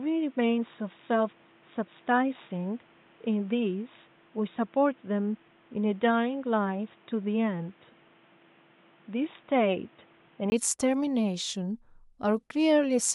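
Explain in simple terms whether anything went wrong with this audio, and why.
From the start until 10.52 s, the speech sounds dull and boxy because nothing above 3.8 kHz gets through, and a faint background noise sits underneath it. At 10.52 s there is a very brief gap, about 20 ms, and then the sound opens up and the noise goes away, while the loudness stays about the same. That pattern is the signature of an input switched to a poorer device. The likely cause is the recording starting on a weaker microphone or headset before changing to a better one.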